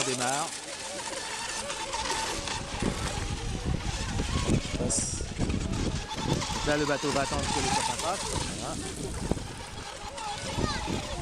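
No technical faults can be heard anywhere in this recording.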